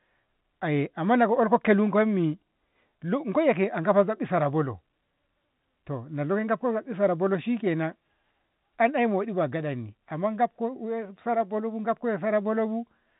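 Nothing stood out on listening to this speech, which carries the narrow band expected of G.711 A-law telephone coding.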